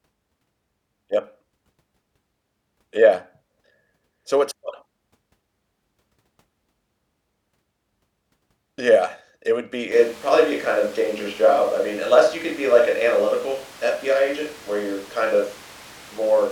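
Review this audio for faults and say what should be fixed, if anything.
At 9.92 s the close microphone's feed likely drops out and a switch to a distant microphone takes over until the end. The speech turns suddenly roomy and hollow with less bass, at roughly the same level, over room noise about 25 dB below it. Record a backup close microphone and monitor the close channel throughout, so a failed or unplugged feed is caught and re-recorded.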